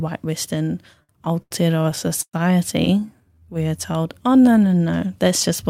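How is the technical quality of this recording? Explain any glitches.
The recording has three delivery glitches: two bursts of stutter and one stretch of slowed playback.

Repeated stalls (stutter) occur from 1.03 to 1.54 s and from 1.91 to 2.36 s, each with four brief stalls. Packets arrived late, the receiver's buffer emptied, and it prolonged the last sound to fill about 155 ms and 143 ms, with the longest stall at 111 ms. The speech halts and drags, but no syllables drop out, unlike true packet loss.

A jitter buffer slow-down runs from 3.00 to 4.65 s. To rebuild its reserve, the receiver repeated single pitch periods, adding about 253 ms so the speech plays at 85% speed. Pitch stays steady and sounds stretch smoothly, rather than stopping and restarting as in the stutter.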